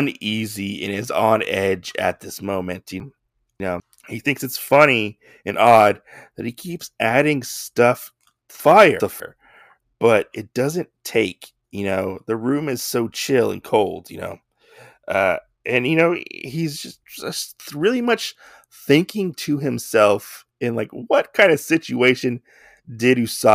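At 3.0 to 3.8 s there are chunks out of order. A 200 ms piece arrives three chunks late and plays after what should follow it, so the sound jumbles at the hard joins. At 8.6 to 9.2 s it happens again, two chunks late.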